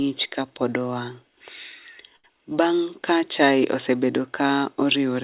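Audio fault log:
2.16–2.26 s short stall from a late packet: the jitter buffer ran empty, so the last sound was held about 76 ms until the packet arrived, with nothing lost.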